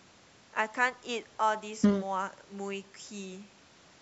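Nothing is technically wrong with this speech clip. It carries the sound of a call's microphone processing, with the lowest bass trimmed away and nothing above 8 kHz, which is how that path normally behaves.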